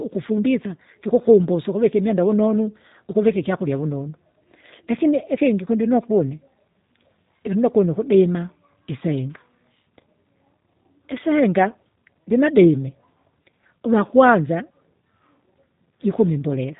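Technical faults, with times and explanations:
Throughout, G.729 codec: the speech sounds plainly rough and slightly synthetic, with nothing above 3.8 kHz. The codec discards the waveform and resynthesises each 10 ms frame from a vocal tract filter, pitch predictor and a few pulses, consistent with 8 kbit/s G.729A.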